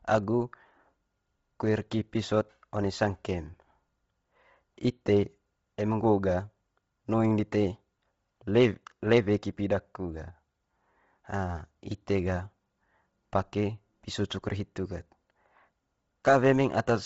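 Throughout the speech, the audio likely passed through Bluetooth LC3 compression at a starved bitrate, which fits about 24 kbps in 7.5 ms frames. Nothing remains above 7.7 kHz, and the heavily damaged upper band is noise-filled, giving the speech a breathy, grainy edge.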